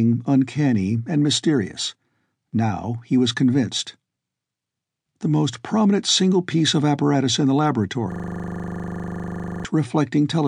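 At 8.12 s, right after "of apparatus in the", the speech freezes into a system hang loop that lasts until 9.65 s. The computer or its audio driver stalled while the sound hardware kept replaying the same 40 ms section of its ring buffer, 38 times in a row. At 25 repeats per second, this is heard as a steady buzz. A spectrogram shows evenly spaced vertical stripes, and the waveform repeats one identical block.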